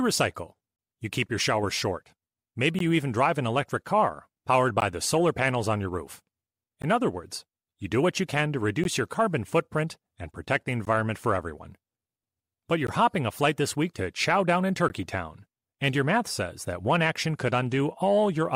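Gaps at joins of encoded pieces break the speech at 2.79, 4.80, 6.82, 8.84, 10.85, 12.87 and 14.88 s, roughly every 2 s. The audio was encoded as separate pieces and joined without trimming, so each encoder's start-up delay and final-frame padding survive as silence. Each dropout lasts 16 ms, with edges smeared by the codec, and the speech then resumes exactly where it stopped, producing a regular stutter.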